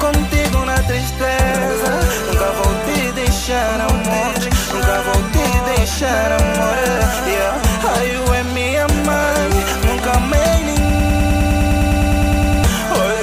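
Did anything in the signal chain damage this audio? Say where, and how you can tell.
Yes. From 10.9 s to 12.64 s a broken-record loop repeats one 102 ms fragment 17 times, likely from a stalled playback or stream buffer resending its last block. Unlike echo, every repeat is identical and undecayed, and the intended audio is lost.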